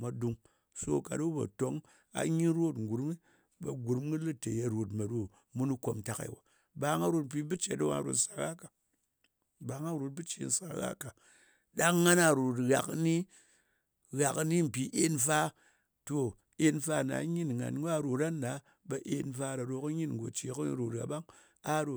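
Listening through the speech recording, nothing stood out as a technical fault at any point.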